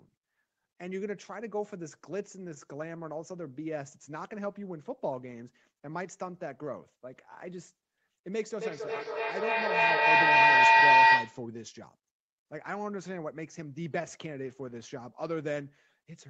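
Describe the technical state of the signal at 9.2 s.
At 9.2 s the signal is inside a feedback howl running from 8.57 to 11.48 s. Two devices sharing a room are on the same call, so the microphone picks up the loudspeaker, and each trip around that loop comes back louder rather than fading. The repeats collapse onto the frequency the loop favours, giving a sustained tone around 1 kHz, with the loop repeating roughly every 300 ms, that peaks about 15 dB above the speech.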